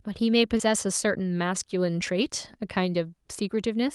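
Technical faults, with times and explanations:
0.57–0.61 s, short concealed packet loss: about 20 ms of audio never arrived. The receiver stretched the preceding sound over the gap, causing a brief smear.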